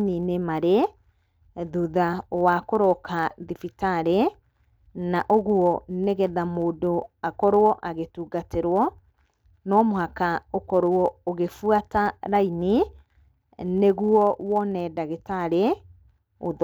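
From start to finish, the speech carries a block size mismatch (truncated): one processing stage hands over longer blocks than the next stage reads, so the tail of every block is discarded. Each cut leaves a discontinuity, heard as a steady buzz at about 92 Hz. So little is dropped that the speech plays at essentially normal speed and pitch. A spectrogram shows vertical striations every 10.9 ms, and the waveform shows matching regular jumps.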